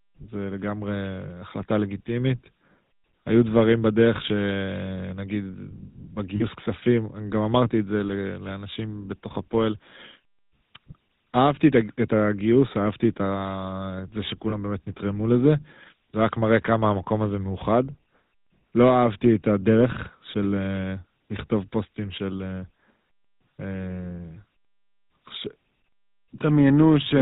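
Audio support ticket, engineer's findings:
GSM full-rate codec, whole clip: buzzy, gravelly speech, nothing above 4 kHz. Pulse-driven vocal-tract model at a rate consistent with 13 kbps. Unlike simple band-limiting, the roughness sits inside the voice itself, not just lost brightness.

Lost GSM frames, 6.36–6.43 s and 14.50–14.56 s: brief rough, metallic ring holding the sound. Decoder repeats the last good frame. Gap lengths fit two and one 20 ms frames. Distinct from dropouts: sustained buzz, not silence or clicks.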